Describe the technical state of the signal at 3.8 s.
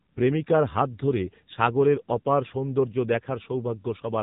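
At 3.8 s the speech is still under the AMR narrowband mobile codec that runs the whole clip. Nothing gets past about 3.8 kHz, and the vocal-tract model driven by sparse pulses sounds plainly buzzy and synthetic, which fits a low rate of around 7.4 kbps.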